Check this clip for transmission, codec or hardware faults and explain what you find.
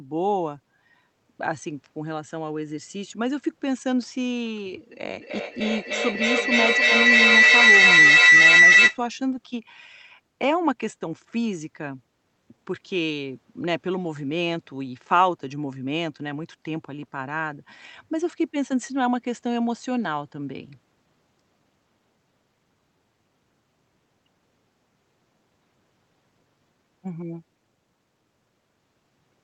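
One fault stands out: a feedback howl from 5.2 to 9.04 s. Two devices in the same room kept re-amplifying each other's output, building a tone near 2 kHz with repeats roughly every 300 ms that peaks about 12 dB above the speech. A spectrogram shows a narrow, brightening line around 2 kHz, and the waveform shows a swelling envelope. The call codec also limits the band at 8 kHz.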